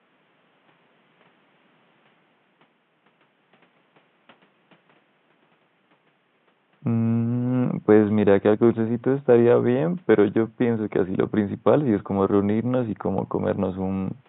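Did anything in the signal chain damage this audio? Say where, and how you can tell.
No, nothing in the signal chain has damaged this speech recording. The only thing under it is the room's own background noise, sitting about 42 dB below the speech, which belongs to the recording space rather than to any stage of the chain.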